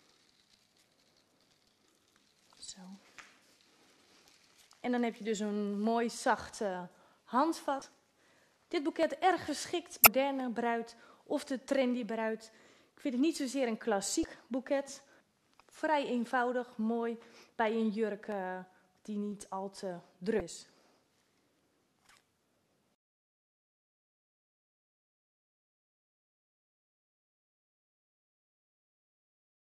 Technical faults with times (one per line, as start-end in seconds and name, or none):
1.65-1.68 damaged data in a compressed stream
7.79-7.82 damaged data in a compressed stream
10.03-10.07 damaged data in a compressed stream
14.21-14.25 damaged data in a compressed stream
20.38-20.41 damaged data in a compressed stream